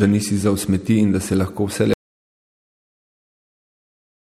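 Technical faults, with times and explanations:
1.94 to 4.30 s, audio dropout to silence: the speech stops abruptly right after "da se lahko vse" and never returns, leaving about 2.4 s of silence through to the end with no room tone or noise floor beneath it. That silent gap is the mark of the input signal vanishing while recording carried on writing empty samples, likely from a disconnected device, a broken link or an accidental mute. Whatever followed in the speech is lost.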